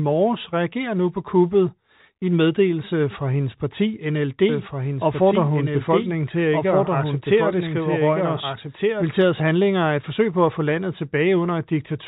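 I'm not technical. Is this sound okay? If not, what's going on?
No. The speech was likely captured a second time through a slower path, causing a doubled audio track. From 4.49 to 9.03 s, after "meddelelse fra hendes parti", a quieter copy trails about one and a half seconds behind. It stops abruptly before "handlinger er et forsøg".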